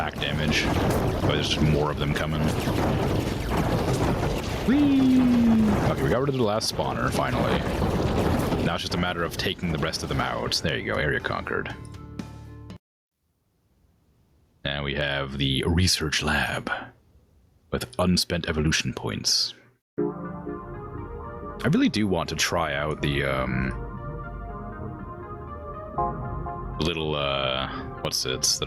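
Gain pumping runs through the whole clip, likely from input gain set far too high with a fast limiter clamping it. The gain swings around 15 dB under loud sounds. The waveform looks squashed, with loud and soft parts closer in level.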